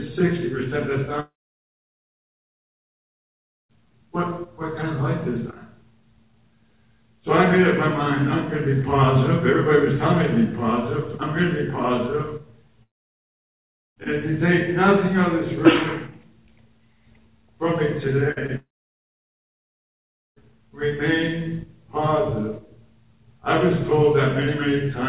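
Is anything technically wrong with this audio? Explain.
Yes. The audio has three long gaps and two shorter breaks. Its top end stops at 4 kHz, as expected from the G.711 mu-law call path it passed through.

Long network dropout, likely. This happens three times: 1.2 to 3.71 s, 12.83 to 13.98 s, and 18.56 to 20.53 s. Each gap lasts about 2.5, 1.1 and 1.8 s. No audio reached the receiver in those spans. The receiver extended the last sound briefly, and it faded out. Then there is near-silence. When the sound returns, the missing stretch is simply gone.

Burst of packet loss. From 18.32 to 18.38 s, about 40 ms of audio never arrived in time. The receiver covered the hole by carrying the previous sound forward while turning it down. You hear a short held buzz or fading hiss. The audio then jumps ahead, and the part in between is lost.

Short concealed packet loss. From 18.46 to 18.50 s, a tiny piece of audio went missing. 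The receiver patched about 20 ms by continuing the last sound and blending back in. It is heard as a brief smear or wobble, just before the third long gap.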